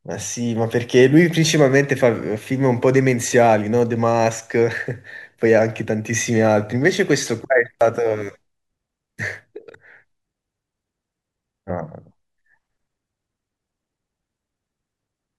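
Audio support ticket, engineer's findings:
Jump forward in the speech at 7.81 s, roughly 20 ms gone. No gap, the two sides butt straight together. Dropped buffer (overrun). Likely cause is the capture side not reading its buffer before hardware overwrote it.

Same symptom at 11.70 s, about 30 ms of speech missing. Likely the same dropped buffer mechanism, the audio skipping ahead by the length of the unread block rather than pausing.

Jump at 9.73 s. Speech jumps ahead about 50 ms. Compressed frames skipped: two frames of 26.1 ms never played, either missing from the stream or rejected by the decoder.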